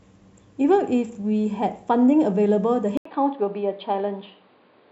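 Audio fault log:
2.97 s to the end: input switched to a poorer device. After a gap of about 80 ms, the speech returns narrower and duller, with nothing above 4.8 kHz, a level drop of roughly 5 dB and a different background noise sitting around 40 dB below the speech. The likely cause is the recording input moving mid-take to a lower-grade microphone or a headset call profile, whose limited bandwidth, gain and noise floor replace the original path's character.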